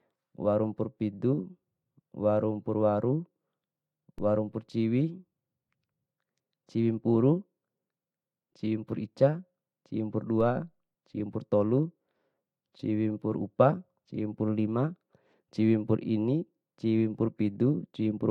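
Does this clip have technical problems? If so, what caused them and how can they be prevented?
Yes, there's a DC step twice, at 4.18 s and 10.41 s. The waveform's zero line suddenly jumps by about -35 dBFS, which you hear as a low thump while the speech carries on. The offset then eases back as a 2 Hz high-pass drains it away. To prevent it, keep the converter from recalibrating mid-take, and put a DC-blocking high-pass ahead of any input that gets switched in.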